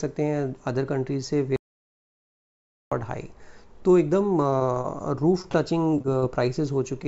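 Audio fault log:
1.56–2.92 s, audio dropout to silence: the sound cuts off dead for about 1.35 s and comes back mid-flow. The gap is silent with no room tone, most likely from the input link dropping while the encoder kept writing silence, so that stretch is simply gone.
4.50–4.86 s and 5.42–6.24 s, repeated packet loss (robotic sound): short holes of up to about 24 ms keep coming, each patched by stretching the last bit of sound, roughly a fifth and a seventh of those spans, so both stretches turn choppy.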